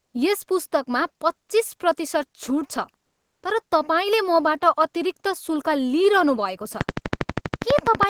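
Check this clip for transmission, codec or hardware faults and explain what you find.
Two faults can be heard: a stretch of comfort noise in place of the background, and a train of clicks at the end.

From 3.07 to 3.43 s, comfort noise replaces the background for 360 ms. The sender likely stopped transmitting during a pause, as Opus DTX does. The receiver filled the gap with smooth synthetic hiss. It is about 2 dB quieter and loses the real background's detail.

From 6.81 s to the end, a train of clicks runs over the sound. They come regularly, 12.3 per second. Each peaks around 20 dB above the signal. The cause is likely interference from nearby equipment or a faulty connection or power supply. The clicks are heard as steady ticking, pauses included.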